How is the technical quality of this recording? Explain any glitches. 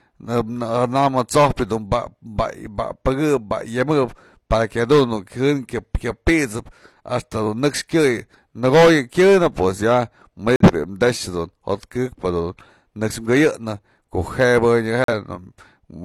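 The speech is interrupted by two abrupt silent holes, at 10.56 to 10.71 s and 15.04 to 15.13 s. These are corrupt frames that were muted. Bit errors damaged compressed frames, the decoder rejected them, and the player substituted silence. Each gap fits about two frames, and the timing afterward stays intact.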